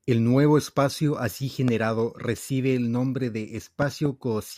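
Loud pops in this speech clip at 1.68–1.70 s and as a double pop at 3.82–4.08 s, roughly 10 dB above the speech, likely voltage spikes from static or a switch.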